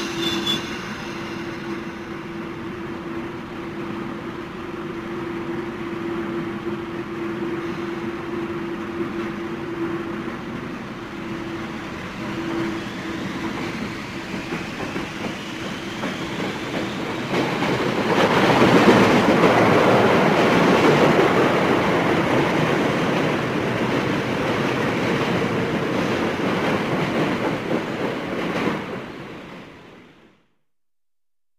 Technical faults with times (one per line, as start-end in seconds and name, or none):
0.00-31.59 crude rate conversion